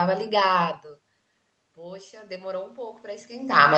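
At 1.75 s the input level drops by about 20 dB. Automatic gain rising follows. The gain control hears a weak signal and lifts its gain slowly until the end. Voice and room noise swell up together, both limited by the call path's 8 kHz ceiling.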